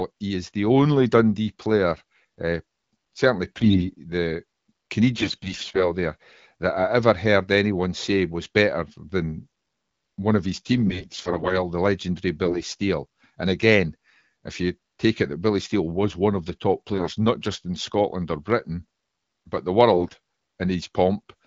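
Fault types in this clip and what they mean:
AMR bit errors: flipped bits in the lightly protected parts of AMR-WB frames misplace excitation pulses and skew fine pitch, gain and spectral values, so six short bursts of speech turn hoarse and gargly while keeping pitch and level, rather than dropping out like lost frames.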